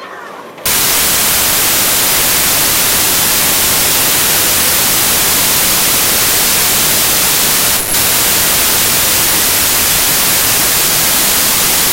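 Wrong sample width runs from 0.66 s to the end. Samples written as 32-bit integers are read as packed 24-bit, so bytes from neighbouring samples combine into harsh loud noise. The buried sound plays at 0.75 times speed and correspondingly lower pitch.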